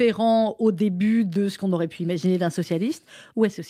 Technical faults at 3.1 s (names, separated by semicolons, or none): clock drift between sender and receiver; repeated timing corrections